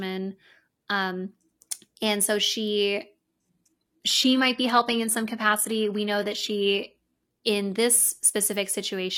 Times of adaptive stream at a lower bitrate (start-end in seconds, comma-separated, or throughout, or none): 3.24-7.24